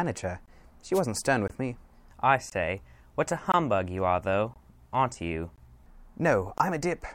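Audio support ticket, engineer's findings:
Gap between chunks: hard-edged 20 ms silences at 0.46, 1.48, 2.50, 3.52, 4.54, 5.56, 6.58 s. Streaming/playback joins between 1 s chunks. Regular spacing and clean edges, with nothing missing, rule out dropouts.

Wireless microphone noise hit: short burst of static/swish, 0.93–1.01 s. FM radio link fading, receiver noise rising over the speech. Noisy rather than silent, and at a one-off time, unlike the chunk gaps.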